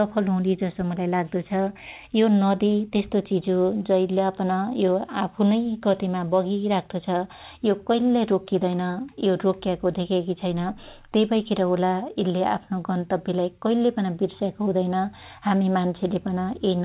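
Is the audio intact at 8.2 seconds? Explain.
Yes, the audio at 8.2 seconds is intact, with the speech carried cleanly through the call path, whose G.711 mu-law coding leaves nothing above 4 kHz.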